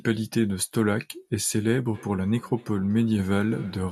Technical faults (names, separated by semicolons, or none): feedback echo between two devices